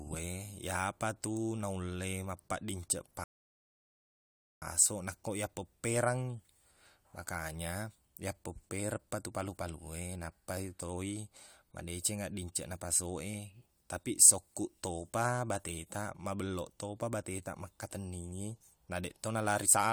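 A rebuffering stall interrupts the speech from 3.24 to 4.62 s, right after "iyapa tu naulle mappaqdinceq". The player exhausted its downloaded audio and halted until more data arrived, so the sound drops abruptly into silence for about 1.38 s. Playback then picks up precisely where it paused, continuing with "nakko yappeppereng". Nothing is skipped or repeated; the stall simply inserts dead time into the clip.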